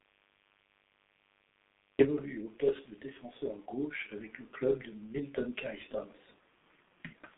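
A speech recording carrying two faults for its whole length. A mains buzz sits under everything: a raspy 50 Hz hum, well below the speech but always present, caused by switching spikes leaking in twice per cycle. On a spectrogram it appears as evenly spaced horizontal lines at 100 Hz intervals climbing into the kilohertz range, even through pauses. The speech has also passed through the G.723.1 codec at heavy damage, which fits a rate near 6 kbit/s. It sounds muffled and hoarse, with smeared consonants, because the line band runs only from 150 Hz to 3.6 kHz and the long frames update the voice model slowly. A spectrogram shows a hard ceiling with nothing above 3.8 kHz and blurred, blocky formant detail.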